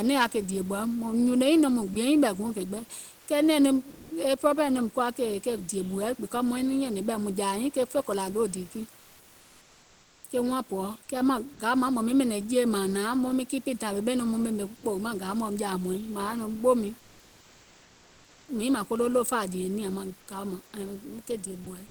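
Speech over some steady room noise, sitting about 31 dB below the talker, with two related transmission faults. First, there's sound dropped by the voice detector: short bits of speech vanish into flat noise at 1.93–1.95 s, 3.90–4.10 s, 11.53–11.59 s and 21.64–21.66 s. The sender's detector likely mistook quiet speech edges for background and stopped sending until it triggered again. Second, comfort noise in place of the background shows up during the pauses at 3.19–3.27 s, 8.99–10.23 s and 16.99–18.48 s. The real room noise is swapped for a smooth, featureless hiss within a dB or two of the original level, most likely synthetic fill from discontinuous transmission, which fits Opus DTX.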